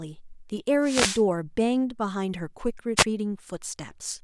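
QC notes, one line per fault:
0.82–1.23 s, wireless microphone noise hit: a hiss of static swells over the speech for about 0.4 s, then clears. The analogue FM radio link faded as reflected signals cancelled at the receiver, so receiver noise rose into the audio.
2.96–3.04 s, wireless microphone noise hit: a brief swish of static, under a tenth of a second. The same kind of short multipath fade lets receiver noise briefly rise into the speech.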